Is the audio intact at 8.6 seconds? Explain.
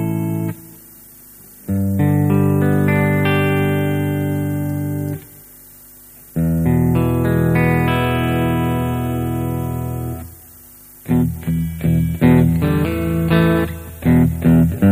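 Yes, the audio is intact at 8.6 seconds, with no dropout, click, distortion or other fault at that point.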